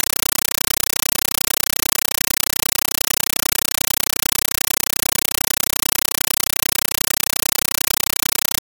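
From the first moment to the end, the clip is a compressed stream played as audio: an AC-3 bitstream passed to the output as if it were ordinary samples, never decoded. Each frame becomes an 8 ms blast of static followed by silence, repeating 31.25 times a second, so the sound is a loud, rigid chatter. Unlike broadband noise or dropout crackle, its gating is perfectly regular, and its density fits a 384 kbps stream.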